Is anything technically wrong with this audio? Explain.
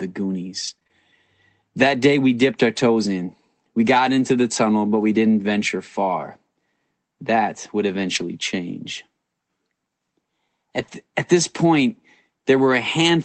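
Yes, two faults stand out in this speech clip.

From 0.67 to 0.91 s there is repeated packet loss (robotic sound). Four short gaps, the longest 24 ms, are patched by extending prior audio. On a spectrogram this shows as smeared, repeated slices. The result is a choppy stutter with pieces missing.

At 8.15 to 8.21 s, two lost packets are rebuilt from error correction: about 40 ms of low-bitrate copies. The waveform has no gap, but the spectrogram shows a grainier, noisier patch, which sounds briefly rough.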